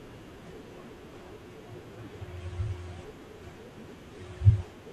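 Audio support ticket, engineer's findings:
No faults found in the speech audio; nothing to report for this ticket.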